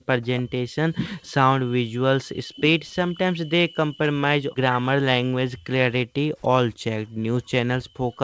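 An echo canceller that likely could not tell the near talker from loudspeaker echo during double talk keeps turning this speech down, so it is speech suppressed in double talk: the voice dips by up to about 40 dB or breaks into pieces across 0.13–1.34 s, 1.99–6.4 s, 6.83–7.32 s and 7.89–8.19 s.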